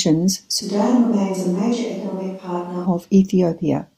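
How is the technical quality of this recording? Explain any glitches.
The recording has one clear glitch, a switch to a distant microphone from 0.63 to 2.85 s. The speech abruptly turns roomy, hollow and thinner in the bass, dropping around 10 dB, likely because the close microphone dropped out and a farther one took over. The waveform steps sharply down at the start and back up at the end, and the spectrogram loses low-frequency energy while showing smeared, reverberant tails and a raised noise floor roughly 35 dB below the speech.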